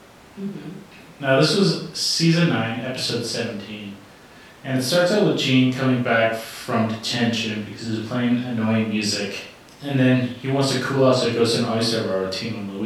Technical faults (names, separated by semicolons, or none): none